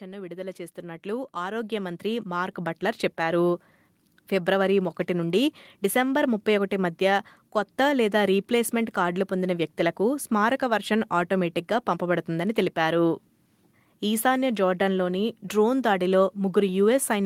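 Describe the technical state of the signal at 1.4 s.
At 1.4 s the signal is in the middle of an automatic gain rising, running from 0.05 to 3.47 s. The gain control judged the input too quiet and is steadily turning it up, by about 14 dB overall, so the speech and the background noise swell louder together.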